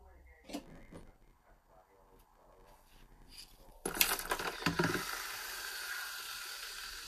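A block size mismatch with padding runs from 0.61 s to 3.71 s: one stage hands over blocks shorter than the next stage expects, and the shortfall in each block is filled with silence. Those tiny gaps repeat at about 93.8 Hz, producing a steady buzz, which fits a 512-sample read block. Because every block carries padding, the audio plays out slower, at about 0.861 times normal speed, while its timbre stays.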